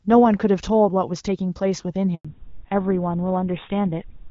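At 2.15 s a handover gap cuts the speech for 100 ms, until 2.25 s, as the call switches networks and no speech frames arrive. From 2.25 s a fallback to narrowband removes everything above 4 kHz. The HD Voice sound, consistent with AMR-WB at around 12.65 kbit/s, turns duller and rougher, which fits a GSM full-rate codec.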